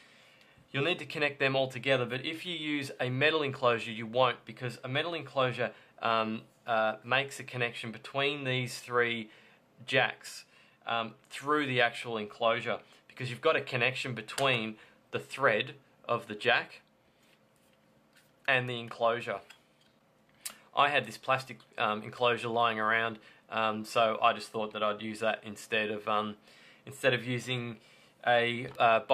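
Nothing here calls for comment, as no technical faults turn up anywhere in this audio.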